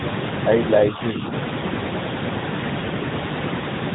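A speech recording carries two faults from start to finish. A ground loop or nearby transformer has coupled the 50 Hz power line into the signal, so mains hum sits underneath everything as a steady low tone, loud enough to be only about 5 dB below the speech itself. The audio has also been squeezed through the AMR narrowband mobile codec, which rebuilds speech from a vocal-tract model and a handful of pulses per frame. Here nothing above 3.8 kHz survives, and the voice turns plainly buzzy and synthetic, damage that fits a bitrate around 10 kbps.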